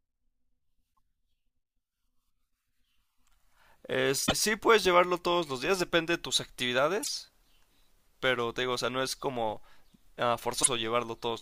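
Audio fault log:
0.90–0.99 s, 4.24–4.33 s, 7.00–7.09 s, 10.60–10.67 s: damaged data in a compressed stream. Each is a short chirp, squawk, click or hole cutting into the speech for under a tenth of a second. Corrupted bytes make the decoder misread those frames and lose sync until it finds the next valid frame header.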